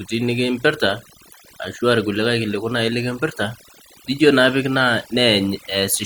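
Throughout the speech, overdone noise removal is audible. The noise reduction was set too hard. Frequency bands near its noise estimate are pulled far down or cut, and quiet speech detail goes too. In the pauses the background drops and breaks up into twinkling specks.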